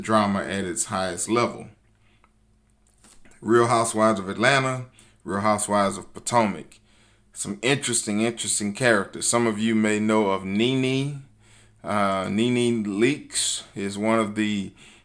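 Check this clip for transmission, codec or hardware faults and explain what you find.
Nothing in the speech signal points to a transmission, codec or hardware problem, and it holds steady and continuous throughout.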